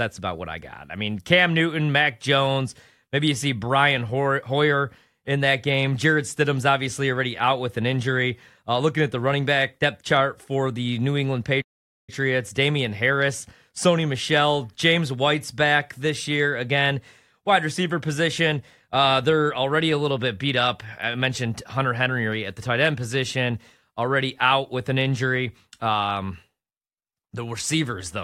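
A playback stall interrupts this speech clip from 11.61 to 12.10 s, dropping the output to silence for about 0.46 s before the speech carries on. The likely cause is the player running out of buffered data or its output thread being briefly blocked.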